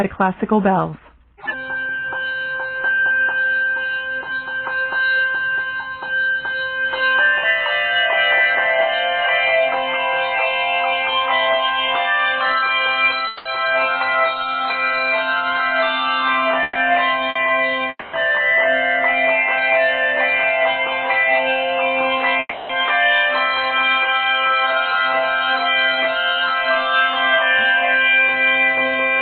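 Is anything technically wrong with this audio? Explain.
Yes, the audio has gaps where part of the signal never arrived.

Long network dropout is the likely cause at 13.27 to 13.48 s, 17.89 to 18.16 s and 22.39 to 22.72 s. Each time, the receiver stretches the last sound into a fading buzz or hiss for 180, 240 and 300 ms. The second and third end in about 30 and 20 ms of silence. The audio then resumes further on, with that stretch gone.

Bursts of packet loss occur at 16.63 to 16.78 s and 17.29 to 17.38 s. Consecutive packets went missing, so the receiver held the preceding sound and faded it for 120 and 60 ms. This leaves a brief held buzz or fading hiss, then a jump forward past the lost audio.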